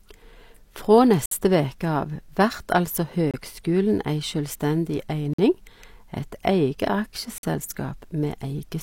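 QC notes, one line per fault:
1.26–1.32 s, 3.31–3.34 s, 5.33–5.39 s, 7.38–7.43 s: gap between stream segments. Segment timestamps leave holes, filled with silence, so hard-edged 27–58 ms dropouts cut the speech about every 2 s, which fits 2-second segments. No speech is lost.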